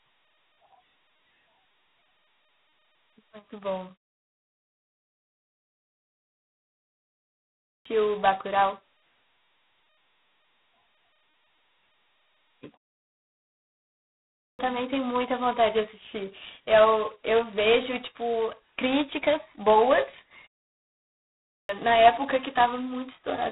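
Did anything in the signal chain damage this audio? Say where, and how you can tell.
Yes. At the codec stage, the whole clip carries G.726 ADPCM damage at 16 kbit/s, the coarsest rate, with only two bits per sample describing the error from an adaptive prediction. The result is a harsh, rasping hiss that rises and falls with the speech level, and the band stops at about 3.9 kHz. That narrow band fits the codec's telephone bandwidth, and the grit is quantisation noise from so few bits.

At the playback stage, there are three clipped starts after a pause, where the output device goes idle in silence and fails to resume in time. Speech re-enters abruptly at 7.85 s, after a 3.3 s gap, losing about 0.63 s from 7.22 s. It happens again at 14.59 s, after a 1.3 s gap, losing about 0.57 s from 14.02 s, and at 21.69 s, after a 0.7 s gap, losing about 0.61 s from 21.08 s. In each case the opening sounds are missing.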